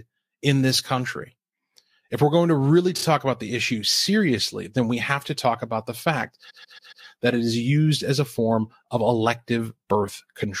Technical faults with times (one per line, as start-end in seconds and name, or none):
2.97-3.03 repeated frames
6.49-7.05 repeated frames